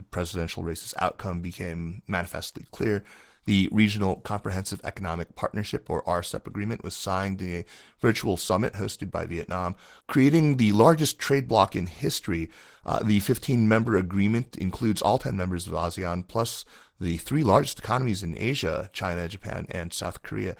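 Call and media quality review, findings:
Opus voice compression, throughout. Speech sounds hoarse, slightly robotic, with plainly audible coding damage. Probable component: Opus encoder in hybrid mode, SILK below 8 kHz and a CELT layer above, in 20 ms frames. Excitation coarsely coded, consistent with a rate near 16 kbps. Unlike band-limiting, the top end is present rather than cut off.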